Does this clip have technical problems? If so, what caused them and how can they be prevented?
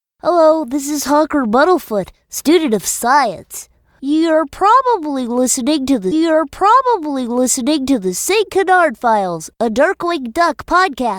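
Yes. A stream segment repeated from 6.11 to 8.11 s: right after "probably listening to the", the player queued the same two-second segment twice, replaying it with a blip. Deduplicating segments by sequence number before playback would prevent this.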